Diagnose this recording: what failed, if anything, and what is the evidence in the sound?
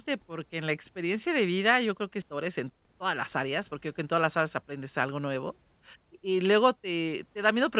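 A skip ahead on the network path or in the jitter buffer occurs at 2.22 to 2.24 s, right after "vida yo creo que". About a second of speech is gone, and the two sides are spliced with no fill. A waveform shows an abrupt seam rather than a silent gap, and the spectrogram shows harmonics changing instantly, all below 4 kHz as expected from a telephone-band codec like G.711.

A jitter buffer speed-up follows from 2.34 to 5.66 s. The receiver trimmed short pitch-period pieces to drain excess buffered delay, running about 8% fast at unchanged pitch and removing roughly 300 ms. The spectrogram shows the same harmonic spacing with syllables compressed, and the speech sounds hurried.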